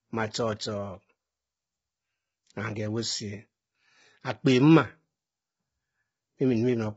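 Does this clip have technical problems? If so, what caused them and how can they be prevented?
Yes, the speech sounds rough and grainy throughout, with nothing above about 7.8 kHz, likely low-delay AAC compression at a bitrate around 16 kbps. Giving the encoding more bitrate would fix it.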